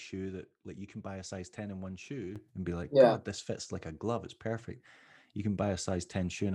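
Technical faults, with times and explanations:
2.36 s to the end: sudden gain jump. The level steps up by about 8 dB from one sample to the next and stays there. The speech and the background noise rise together, so the noise floor lifts at the same instant as the speech. That shared step is what separates this from a louder delivery. The likely cause is a digital gain setting or bit shift applied at once, with no ramp to smooth the change.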